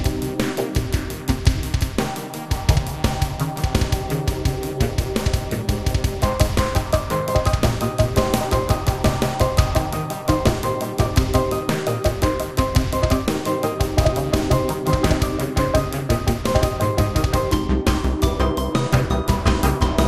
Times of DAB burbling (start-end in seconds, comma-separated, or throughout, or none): 5.21-5.30